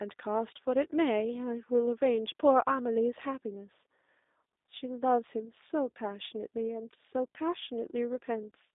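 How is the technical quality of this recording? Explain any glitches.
The recording has one fault that runs through the whole clip: G.729 codec coding. The speech was squeezed through a low-rate VoIP coder, in a form that fits the 8 kbit/s G.729A variant, which models each 10 ms frame with a vocal tract filter, a pitch predictor and a few pulses. The line band sits between roughly 250 Hz and 3.7 kHz, so the speech sounds thin and boxy, and the coding damage is plainly audible as a rough, slightly synthetic buzz on the voice.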